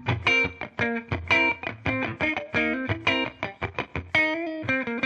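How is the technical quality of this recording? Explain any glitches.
No technical faults can be heard anywhere in the recording, so there are no glitches to explain.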